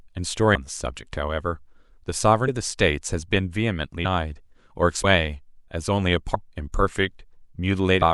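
At 0.54, 2.47, 4.04, 5.03, 6.34 and 8.01 s the speech lurches forward as compressed frames are skipped, dropping about half a second, then roughly 0.2, 0.2, 0.4, 0.4 and 0.3 s, which fits whole frames of about 26 ms. Each join is an abrupt jump ahead, visible where spectrogram harmonics jump discontinuously.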